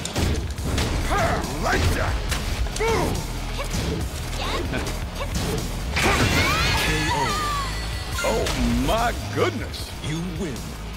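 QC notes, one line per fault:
4.87–4.89 s, skip ahead: The audio jumps abruptly forward with no gap, and the two sides are spliced almost directly, so about a second of material is simply missing. The receiver discarded a chunk of audio, either lost in transit or dropped when the jitter buffer overflowed, while later audio was already queued. Nothing was filled in, so playback resumes at the newer audio and the delay shrinks by roughly a second.
9.15–10.93 s, jitter buffer speed-up: Through this stretch the sound runs noticeably quicker, at 110% speed, yet keeps its original pitch, giving a hurried, pressed feel. The jitter buffer was holding more audio than its target, so to pull the latency back down the receiver repeatedly cut out tiny slices of one or a few pitch periods each. Across this span those cuts add up to around a fifth of a second.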